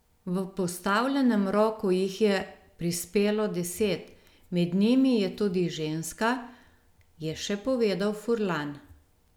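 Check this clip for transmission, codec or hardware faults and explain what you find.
Nothing stood out on listening to this speech recording that would point to a problem in transmission, encoding or the hardware that captured it.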